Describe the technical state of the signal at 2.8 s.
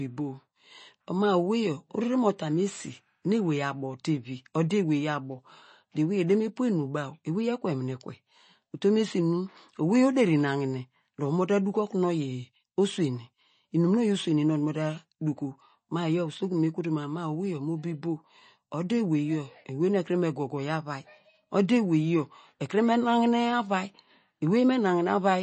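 Nothing sounds above 8.3 kHz and the speech swirls wetly throughout, likely MP3 compression at a rate fitting 32 kbps; a plain low-pass wouldn't warble.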